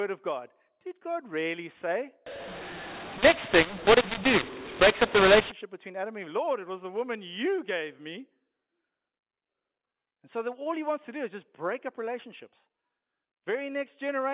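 A mu-law and A-law mix-up runs from 2.26 to 5.52 s, just after "really say": speech coded with mu-law is decoded as A-law, so sample levels are mapped wrongly. The sound turns harsh and distorted, with the pauses filling with noise, inside the narrow telephone band.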